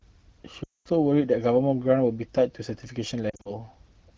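Lost AMR speech frames at 0.64 to 0.88 s and 3.29 to 3.54 s in this wideband speech clip: the decoder conceals missing frames with fading repeats, so the first, roughly 220 ms gap smears and fades, while the second, scattered over 160 ms, gives brief warbling dips.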